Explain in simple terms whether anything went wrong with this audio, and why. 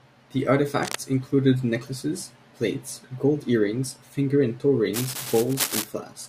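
Cable scratch noise appears from 0.83 to 1.00 s, before "included necklaces plates gold", and from 4.93 to 5.85 s, after "earrings finger and toe". It's likely a worn, moving cable or connector.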